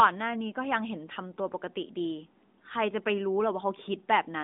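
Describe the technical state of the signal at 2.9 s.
At 2.9 s the audio is intact, with no fault at that moment.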